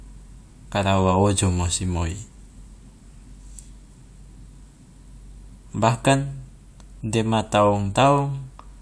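Nothing stood out as a technical problem on listening to this speech recording.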